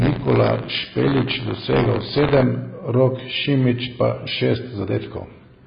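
From 0.0 to 2.43 s, buffer tearing causes a robotic buzz at 86.1 Hz, which fits a 512-sample buffer. About 5 percent of each buffer replays audio from roughly 40 ms earlier.

Throughout the speech, nothing is heard above 5 kHz, and the sound is dull, smeared and warbling. This is likely heavy AAC compression at a very low bitrate, around 16 kbps.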